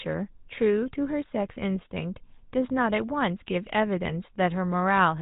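Speech running through GSM full-rate coding from start to finish, buzzy and gravelly, consistent with a 13 kbps stream; a spectrogram shows nothing above 4 kHz and coarse, regularly pulsed excitation.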